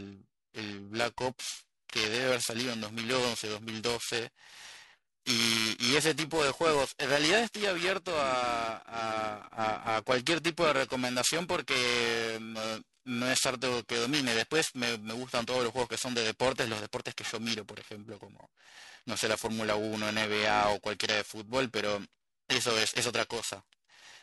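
Speech runs for the whole clip with periodic clock jitter throughout. Interference wobbling the converter's sample clock at around 1 kHz puts sidebands roughly 1 kHz above and below each component, strongest on the brighter, higher-frequency parts, so the speech carries a rough, metallic edge that disappears in the pauses. Unlike random jitter, which adds a diffuse hiss-like haze, this fault's fixed spacing gives a tonal, ringing roughness tied to the signal itself.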